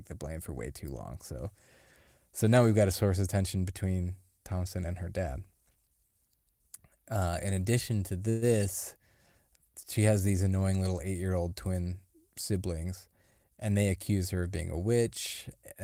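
A speech clip with two network-related timing faults. Just after "in addition to", from 8.29 to 8.53 s, the sound is stretched into a brief fading continuation of the last sound before resuming exactly where it left off. That points to a call audio freeze, likely from delayed packets draining the jitter buffer. About 124 ms was filled in and nothing was lost, which separates it from a dropout, where part of the sound would be missing. From 12.84 to 13.84 s, leading into "accuse her of being", the speech runs about 12% fast and sounds hurried, with around 150 ms trimmed out in small pitch-period pieces. This is a jitter buffer speed-up shedding excess delay. The pitch stays where it was, unlike simple resampling, which would raise the voice along with the tempo.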